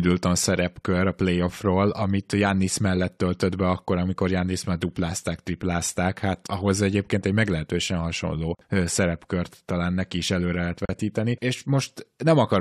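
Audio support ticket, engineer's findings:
Two short dropouts in the speech, at 8.55 s (about 45 ms) and 10.85 s (about 38 ms). Both are a gap at a join of encoded pieces: the segments were encoded separately and butted together untrimmed. Encoder start delay plus last-frame padding leave silence at each seam. Edges are smeared by the codec, and the audio resumes right where it left off. Fix is at the concatenation step: trim priming and padding per segment.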